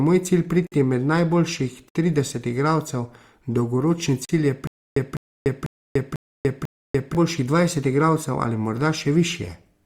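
Speech clip. Blocks of digital silence cut in at 0.67 s for 51 ms, 1.89 s for 60 ms, and 4.25 s for 40 ms. Each is a short hole, with no fade in or out. Stutter with silent gaps runs from 4.67 to 7.15 s. A 204 ms burst repeats five times, every 495 ms, with 291 ms of silence between. A stalled stream likely replayed its last fragment at each retry.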